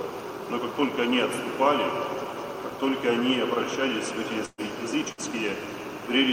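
At 4.45 to 4.61 s and again at 5.12 to 5.21 s, bursts of packet loss are concealed by extending the last sound as a fading buzz or hiss. Unlike a plain dropout, the audio then resumes about 120 ms and 60 ms further on, with the material in between missing.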